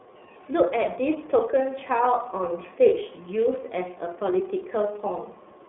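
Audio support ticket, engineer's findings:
iLBC codec coding, whole clip. Speech sounds narrowband, slightly rough and synthetic, with plainly audible codec damage. Spectrogram: nothing above 3.8 kHz, energy confined to roughly 300 Hz to 3.6 kHz, low end thinned. Likely a VoIP leg in the path. Each frame's excitation coded independently; the frame timing fits 30 ms frames and the rate points to the 13.33 kbps mode.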